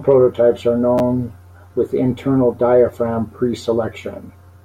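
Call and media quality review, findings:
Chunks out of order at 0.98–1.00 s, just after "prototypes are": one 10 ms chunk delivered one slot late, played after its successor. No audio lost, but three hard joins give a brief jumbled blip; probable jitter buffer or write-ordering fault.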